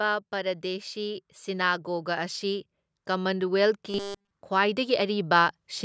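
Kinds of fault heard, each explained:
Automatic gain rising: From 0.3 s to 5.55 s the level climbs by about 10 dB in a slow, continuous ramp. The control judged the input too quiet and kept raising its gain. The speech and the background noise grow louder together, which separates this from a talker moving closer to the microphone. A closer talker makes the speech louder without lifting the surrounding noise.
Robotic sound from repeated short buffers: Between 3.9 s and 4.3 s the speech becomes a rigid, metallic buzz at a fixed 200 Hz. It still roughly tracks the syllables. Essentially the whole stretch is affected. The buzz is most likely caused by the playback repeatedly reusing a fragment about 5 ms long while fresh audio was late. Unlike scattered dropout clicks or gaps, this gives a steady, monotone pitch laid over the speech.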